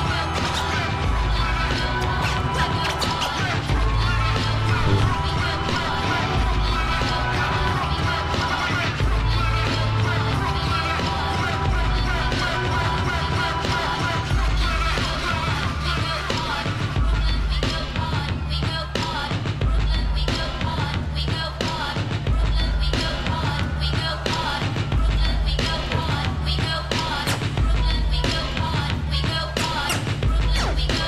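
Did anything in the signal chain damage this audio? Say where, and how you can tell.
No, nothing in the chain audibly damaged this audio.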